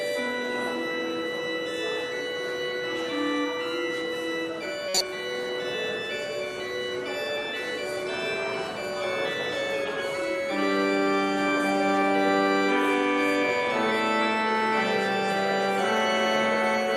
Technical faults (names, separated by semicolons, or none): corrupt frame decoded